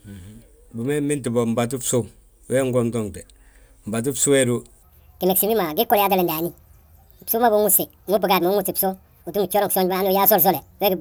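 From 4.83 s to 11.01 s the speech runs as a section at the wrong speed, 1.51 times too fast, likely from playback against a mismatched clock. Pitch climbs about seven semitones together with the tempo, unlike a pitch shift or time-stretch, which changes only one.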